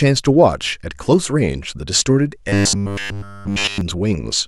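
From 2.49 to 3.81 s, fresh audio was likely arriving too seldom, so playback kept repeating a 10 ms buffer in place of the skipped speech. The result is robotic sound from repeated short buffers, a rigid, metallic 100 Hz buzz throughout that loosely tracks the speech.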